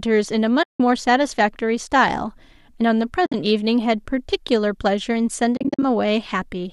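Soft-edged holes open in the speech at 0.63 to 0.80 s, 3.26 to 3.34 s and 5.57 to 5.83 s. Each fades out and back in, and the last breaks into short gaps of about 50 ms. This is AAC frame loss with muting: the decoder silenced the missing frames, and the overlapping windows of the likely low-delay AAC compression taper each hole.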